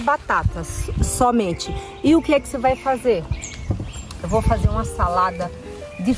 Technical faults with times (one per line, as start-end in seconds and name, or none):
none